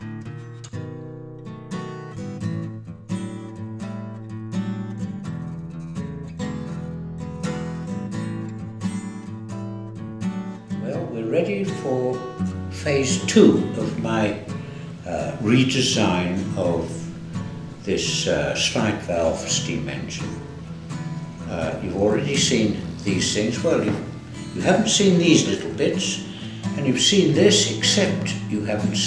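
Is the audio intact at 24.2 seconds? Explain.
Yes, the audio is intact at 24.2 seconds, with no fault at that point.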